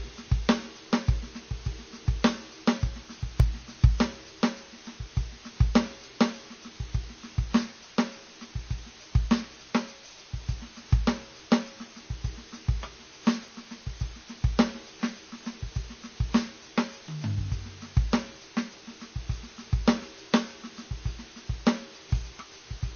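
A steady, even hiss sits under the music for the whole clip, loud relative to the sound, roughly 20 dB below it, yet free of any grit or distortion. This is low bit depth with dither. The signal was kept at only 7 bits, and random dither was added before rounding to those few levels, so the rounding error became plain white noise instead of harsh distortion tied to the music.

Running through the same stretch is a watery, swirling quality, and the top end is missing: nothing comes through above 6.5 kHz. That points to MP3 compression as the likely cause, at a bitrate that fits roughly 25 kbps. Short of bits, the encoder cut the treble at a fixed frequency and dropped weaker frequency components, which come and go from frame to frame and make the sound shimmer and churn.

From 2.88 to 3.92 s, seven small ticks arrive at a regular pace, each no longer than about a millisecond. A second run of five ticks follows from 13.31 to 14.0 s, each at most roughly one and a half milliseconds. 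These are CD scratch ticks. A blemish on the disc spoiled more data than error correction could rebuild, once on each turn, and the player patched or muted the lost samples.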